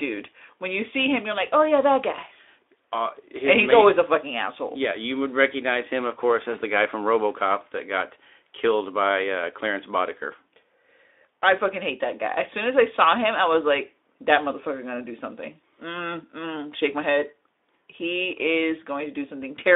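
Nothing goes wrong anywhere in this speech clip; it comes through a Speex link at 15 kbps, so it has that narrow telephone-style band running from about 300 Hz up to 3.6 kHz.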